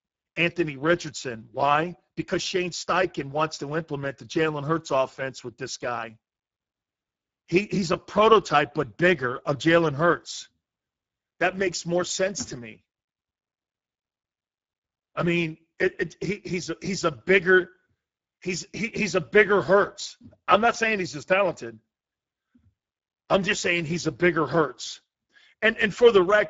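From start to finish the speech carries Speex codec damage, and it's plainly audible: a noisy, hoarse texture, with the sound suggesting a setting of around 10 kbps. The CELP coder has few bits for the excitation at that rate, so the voice gets roughened, and nothing survives above 7.7 kHz.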